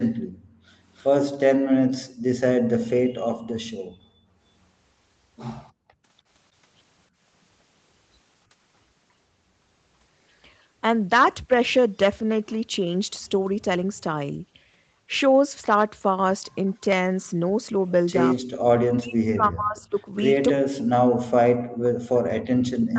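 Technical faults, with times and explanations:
0.17–3.98 s and 5.72–7.23 s, background gated by the echo canceller: the room sound drops into brief holes, about a second in total first, then about half a second, at worst about 33 dB and 31 dB down. The canceller clamped the microphone during loudspeaker playback, then released it.
18.11 s to the end, speech suppressed in double talk: the talker's voice sinks and breaks up, falling by around 40 dB at its deepest. The likely cause is the echo canceller mistaking the talker for loudspeaker echo while both sides spoke, and turning everything down.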